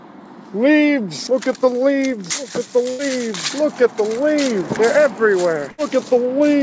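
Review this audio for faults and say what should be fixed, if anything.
Two bursts of packet loss occur, at 2.90 to 3.02 s and at 5.72 to 5.81 s. In each, the receiver conceals the gap by extending the last sound and fading it down, heard as a brief held tone or hiss of about 88 ms and 62 ms. Playback then resumes with roughly 90 ms and 60 ms of audio skipped. The content between is gone, not delayed. The band limit at 8 kHz fits a wideband call codec such as G.722. To prevent it, enable forward error correction or redundancy and give the jitter buffer enough depth to absorb late bursts.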